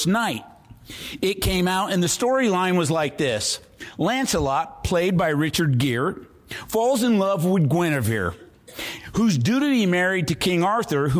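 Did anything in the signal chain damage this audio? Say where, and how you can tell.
No, nothing along the chain audibly damaged this audio, and no stage leaves a mark to point to.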